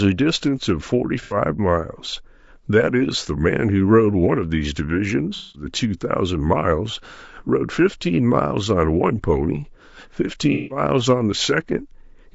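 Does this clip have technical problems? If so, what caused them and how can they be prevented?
Yes. Low-delay AAC compression runs throughout: the speech sounds rough and grainy, likely from AAC-ELD at a low bitrate around 32 kbps, whose short frames blur pitch harmonics. On a spectrogram, noise fills the gaps between harmonics and the top band looks flattened or synthetic. A higher bitrate, or a codec mode with longer frames, would prevent it.

AAC frame loss with concealment occurs at 1.22 to 1.37 s, 5.36 to 5.65 s and 10.52 to 10.81 s. The decoder repeated the last good spectrum, producing smeared, phasey patches. These show as blurred, streaky spectrogram blocks and a flattened waveform envelope. Forward error correction, retransmission or a larger jitter buffer would prevent it.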